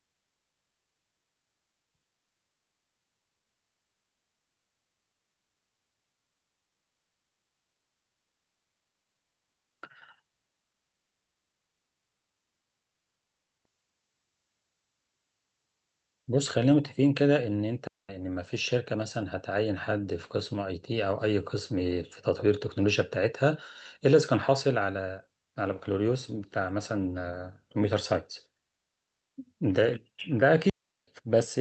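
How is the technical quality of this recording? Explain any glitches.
The recording has two digital wireless dropouts, clean gaps of near silence in the speech, heard through a call codec that limits the top end to about 8 kHz.

At 17.87 s (about 215 ms) and 30.70 s (about 380 ms), the wireless receiver lost too much data and muted with a very fast fade. There is no noise burst on either side. The waveform flattens abruptly, and the spectrogram shows a sharp vertical blank band.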